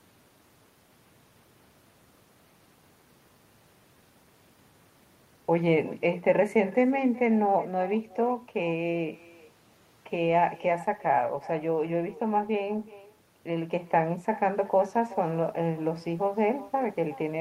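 Throughout the recording, the speech carries an echo with no canceller: the far end is playing the call through a loudspeaker, its microphone picks that sound up, and nothing subtracts it before it returns. Each phrase comes back roughly four tenths of a second later, about 19 dB quieter and thinner. On a spectrogram every burst of energy has a faint duplicate trailing it, and the waveform shows small ghost envelopes filling the gaps.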